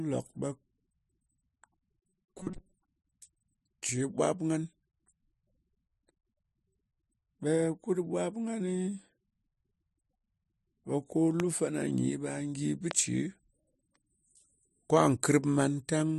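Speech is marred by two kinds of fault. From 2.01 to 2.78 s there is robotic sound from repeated short buffers: the voice hardens into a metallic buzz near 188 Hz while still roughly tracking the words. The likely cause is audio arriving too seldom, so the software repeats roughly 5 ms chunks (one over 188 Hz) and skips most of the real signal. The fixed buzz pitch sets it apart from ordinary choppy dropouts. Two loud pops follow, each standing about 15 dB above the speech: one from 11.40 to 11.42 s, between "ɓe ko" and "lu fana nyi ɓe", and another from 12.91 to 12.93 s, just after "gyi bɨ". Each is a single sharp thump with the speech continuing underneath rather than breaking off, which distinguishes it from a dropout. The likely source is an electrical pulse such as static or a switch transient.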